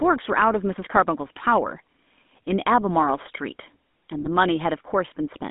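GSM full-rate codec damage runs through the whole of this speech clip. The audio sits in a narrow telephone band of roughly 200 Hz to 3.6 kHz, with the buzzy, gravelly roughness of the original GSM coder. That coder rebuilds speech from a vocal-tract filter excited by sparse, regularly spaced pulses, which fits its 13 kbps mode. GSM bit errors strike from 4.19 to 4.29 s, where the sound breaks into a brief squawking, gargling burst. Corrupted filter, pitch or gain values distort the spectrum and level of several consecutive frames, consistent with a few percent of bits flipped on a weak radio link.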